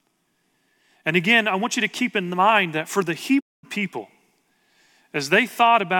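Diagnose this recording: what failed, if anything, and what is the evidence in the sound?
A digital broadcast dropout hits the reception and decoding stage. At 3.39 s the speech fades to silence over 20 ms, returning at 3.65 s. The receiver muted on failed frames. About 224 ms of programme is lost, consistent with seven dropped frames.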